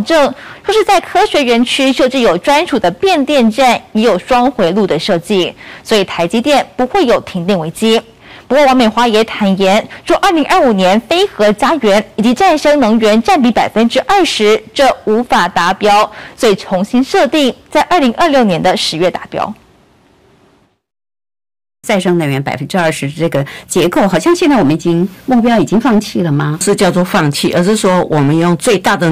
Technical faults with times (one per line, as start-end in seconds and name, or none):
0.00-29.12 hard clipping